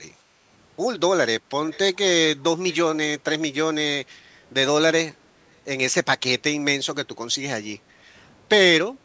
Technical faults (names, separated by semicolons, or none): echo leak; background gated by the echo canceller